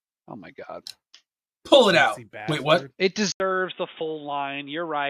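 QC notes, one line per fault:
3.32–5.10 s, input switched to a poorer device: after an 80 ms gap, the speech turns dull and boxy, cut off above 3.7 kHz, slightly quieter, with new background noise, likely from a lower-bandwidth microphone.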